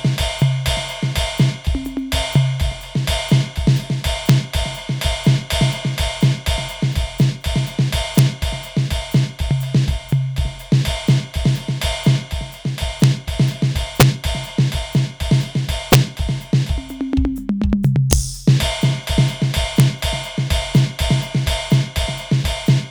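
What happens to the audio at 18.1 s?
At 18.13 s the music hits an integer overflow: a peak pushed about 1 dB past the largest integer wraps to the opposite sign instead of being limited, so the waveform flips across the full range. Unlike clipping's flattened, buzzy distortion, this gives a single violent crack.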